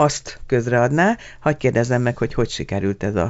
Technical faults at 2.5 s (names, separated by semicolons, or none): none